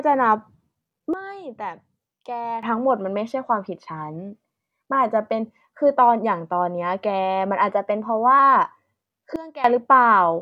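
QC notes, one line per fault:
1.14–2.63 s and 9.36–9.64 s, sudden gain jump: the level drops abruptly by about 13 dB, then about 17 dB, with speech and background noise falling together, likely from a gain change applied without a ramp. The waveform shows a square step in envelope, and the spectrogram dims uniformly across all frequencies.
7.69–8.39 s, drift correction step: speech runs 5.34% fast and about 90 cents sharp, nearly a semitone, then snaps back, likely from clock-matching software changing the playback rate in one step. On the spectrogram, harmonics jump upward together for that span. The waveform looks compressed in time.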